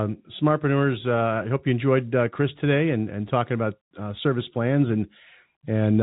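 The speech carries no technical fault, and its band stops at about 3.8 kHz, as expected from G.711 telephone coding.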